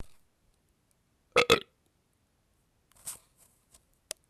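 No technical faults can be heard anywhere in this recording of sounds.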